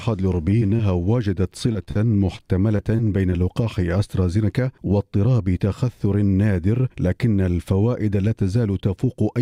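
From 0.35 to 0.81 s and again from 1.73 to 3.34 s, repeated packet loss (robotic sound) breaks up the audio: short dropouts, the longest 26 ms and 44 ms, are patched by extending the preceding sound, leaving a choppy texture with fragments missing.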